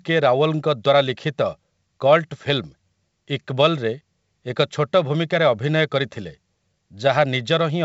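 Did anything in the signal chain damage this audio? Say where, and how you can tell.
No, nothing in the chain has damaged this speech: it shows the expected wideband telephone character of G.722 coding at 64 kbit/s, with any coding trace no more than faint.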